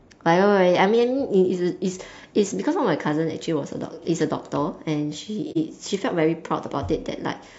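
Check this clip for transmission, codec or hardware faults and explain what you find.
One codec fault turns up, a short dropout in the speech. From 5.51 to 5.58 s there is AAC frame loss with muting: about 43 ms of audio, which fits a single lost frame, was decoded as silence. The overlapping windows fade the sound smoothly out and back in, leaving a brief dip. On a waveform it looks like a tapered gap, and on a spectrogram like a clean vertical blank across all frequencies.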